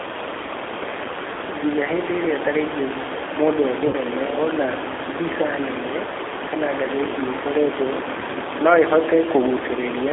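Throughout, the speech sounds thin, slightly rough and synthetic, with nothing above about 3.6 kHz and little below 300 Hz. This is the G.729 codec, a low-rate model of the vocal tract and pitch that points to 8 kbit/s, with the room noise, about 8 dB below the voice, warbling beneath it.

From 3.87 to 3.96 s the voice smears into a buzzy tone or a coloured noise that fades, and stays weak briefly afterwards. This is VoIP packet loss concealed by the speech codec. About 60 ms of audio went missing, which fits three lost packets, and the decoder stretched its last frame to fill the gap.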